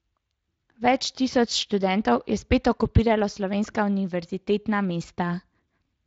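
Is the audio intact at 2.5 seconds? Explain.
Yes, the speech at 2.5 s is intact, with no dropout, glitch or other fault at that moment.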